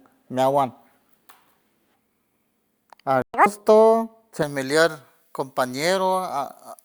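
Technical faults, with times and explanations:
3.22–3.34 s, playback stall: The speech cuts to silence mid-flow for about 120 ms, a gap too abrupt and clean to be a natural pause, and then resumes. The likely cause is that the player ran out of buffered data or its output thread was briefly blocked, so nothing reached the output until it recovered and picked up again.
3.34–3.46 s, catch-up at higher speed: Right after the gap, the speech rushes forward at twice normal speed for about 120 ms, with the pitch jumping up by roughly ten semitones, which gives a brief chipmunk-like chirp before it settles back. After the stall, the player burned through its backlog by resampling faster, which raises tempo and pitch together, and then returned to normal rate once the lost time was recovered.
4.42 s to the end, pre-emphasis left on: From here the speech turns thin, bright and hissy, with sibilants sharp and the body of the sound lacking weight. 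The treble sits about 11 dB high at 10 kHz relative to 1 kHz, which fits a J.17-style transmission boost. It sounds this way because that boost was applied for recording or transmission, and the matching de-emphasis cut was never applied on playback.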